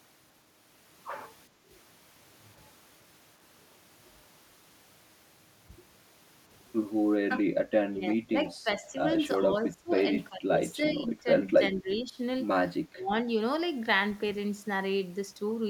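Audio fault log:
1.49–1.69 s, background gated by the echo canceller: the canceller clamped the microphone during loudspeaker playback, so room sound dips by about 8 dB for a fifth of a second, then returns.
7.22–7.51, 7.90–9.10, 9.38–10.11, 10.29–10.61, 10.78–11.26, 11.71–12.19 and 12.89–13.11 s, speech suppressed in double talk: with both sides talking, the canceller likely mistook the talker for loudspeaker echo, so speech drops in pieces, from slightly to around 30 dB deep.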